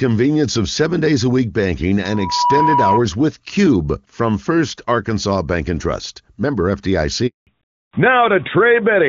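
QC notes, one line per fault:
2.04–3.04 s, loudspeaker feedback squeal: Right after "days a week banking" a steady tone near 971 Hz swells over roughly 0.4 s and settles about 5 dB above the speech. The microphone is hearing its own loudspeaker, and the loop gain tops one at that frequency. It stops at 3.04 s.
7.27–7.47 s, handover gap: The speech cuts out for 200 ms. The call was being moved to another network, and no speech frames came through during the switch. The sound fades fast, stays silent, then returns once the new link is up.
7.47 s to end, fallback to narrowband: After the gap the speech loses everything above 4 kHz and turns duller and rougher. Before this point the call ran on the AMR-WB HD Voice codec at a high rate. That codec was replaced by AMR narrowband at 12.2 kbit/s, which cannot carry the upper band.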